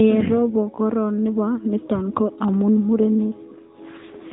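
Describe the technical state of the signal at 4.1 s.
AMR rate drop, from 3.98 to 4.33 s: the mobile codec falls to a lower mode, which fits a step from 12.2 to 5.9 kbps, so the speech turns rougher and more synthetic without a gap.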